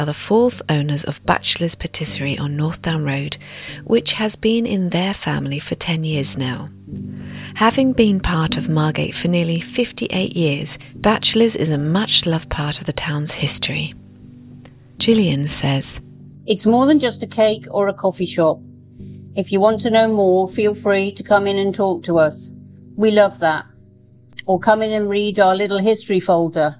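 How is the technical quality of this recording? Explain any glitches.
The technical quality of this recording is sound, with no glitches to explain.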